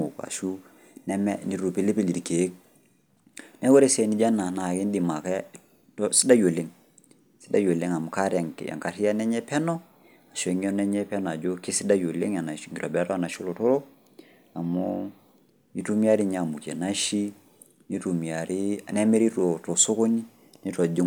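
No technical faults can be heard anywhere in this speech recording. Nothing in the signal calls for attention at any point.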